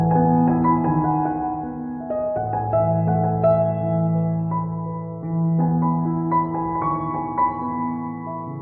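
No technical faults can be heard anywhere in the recording. Nothing in it calls for a time stamp or an explanation of something having gone wrong.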